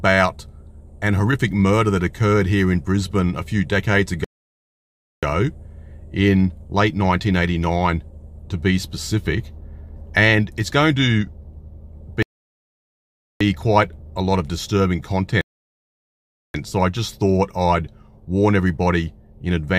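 Rebuffering stalls occur three times: from 4.24 to 5.23 s, from 12.23 to 13.41 s, and from 15.41 to 16.54 s. At each point the sound drops to silence and then picks up exactly where it left off. Playback ran out of downloaded audio and waited for more to arrive, so nothing is lost. Each stall instead inserts dead time, about 0.98 s, 1.18 s and 1.13 s respectively.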